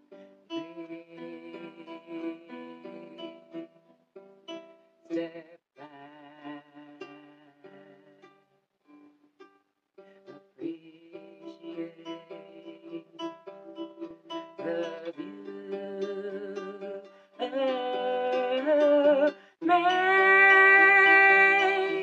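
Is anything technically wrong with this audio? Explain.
Yes, there is an underrun with held sample at about 14.11 s. The output buffer briefly ran dry, and rather than dropping to silence the converter kept putting out its last sample value for roughly 0.34 ms until fresh data arrived. The waveform goes flat for that instant and then continues from where it paused, with essentially nothing lost, so the resumption is soft. The result is at most a faint tick or momentary catch in the sound.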